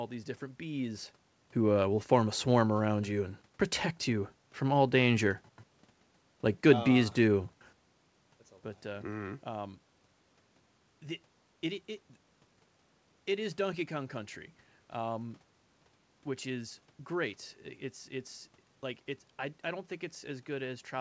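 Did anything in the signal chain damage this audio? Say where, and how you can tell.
No, nothing in the signal chain damaged this audio.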